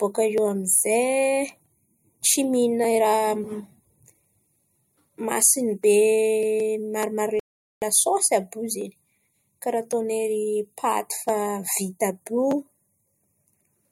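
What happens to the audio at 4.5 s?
Nothing goes wrong at 4.5 s: the audio carries straight through that moment with no dropout, click, distortion or other fault to be heard.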